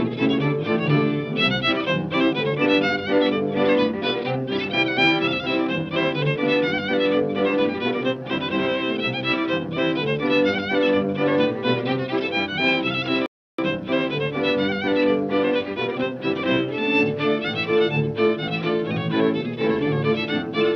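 At 13.26 s a playback stall cuts the sound off mid-flow for about 0.32 s, resuming at 13.58 s. The player likely ran short of data or was blocked. The waveform shows a flat line, and the spectrogram a sharp-edged empty vertical band.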